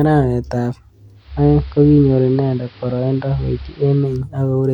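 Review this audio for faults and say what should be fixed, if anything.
At 1.13 s, right after "arawet ab", the speech undergoes a digital radio blend to analogue: the receiver lost its digital stream and cross-faded over 321 ms to the station's AM broadcast, returning at 4.26 s. On a spectrogram a faint hiss floor, roughly 30 dB below the speech, appears for that span. The waveform shifts level by about 1 dB. Improving reception or capturing the station's digital feed directly would prevent this.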